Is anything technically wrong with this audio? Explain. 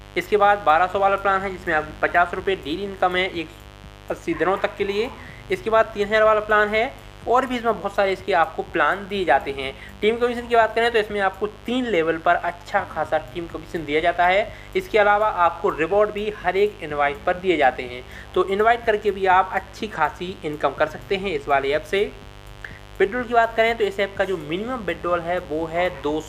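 Yes. A mains buzz runs through the whole clip. Sharp switching spikes, twice per 50 Hz cycle, leak in from something like a dimmer, rectifier or missing shield, giving a steady raspy buzz roughly 20 dB below the signal. A spectrogram shows evenly spaced horizontal lines at 50 Hz multiples reaching several kHz.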